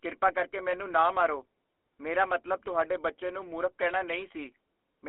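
From start to finish the speech carries the GSM full-rate codec. The band runs from about 300 Hz to 3.4 kHz, so the sound is thin and boxed-in, with no air on top. The codec rebuilds the voice from a vocal-tract filter driven by a sparse, regular pulse train. That coarse excitation leaves a plainly audible buzzy, gravelly roughness on the voice. The damage fits the 13 kbps full-rate mode.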